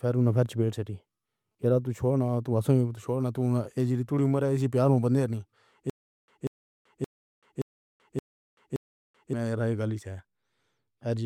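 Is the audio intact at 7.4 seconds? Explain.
No. The stream likely stalled, replaying its last fragment at each retry before running empty. From 5.90 to 9.33 s, ending just before "گلی سے", this stutter with silent gaps repeats a 190 ms burst six times, every 573 ms, with 383 ms of digital silence between. The speech for that span is lost.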